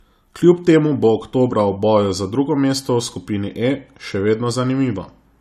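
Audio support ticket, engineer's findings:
Speech, throughout clip: hard band limit, nothing above 14 kHz, with artefacts of the earlier encode retained. Likely low-bitrate audio saved at a high bitrate: an earlier low-rate encode, which fits AAC-LC at around 48 kbit/s, removed the top band and detail; the later MP3 re-encode at a generous rate preserves that damage and cannot restore it.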